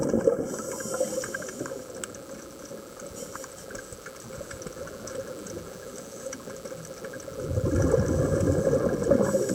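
From 0.97 s to the end, a mains buzz at 60 Hz sits roughly 25 dB under the signal. Switching spikes spread harmonics into kilohertz, making it raspy rather than a smooth hum.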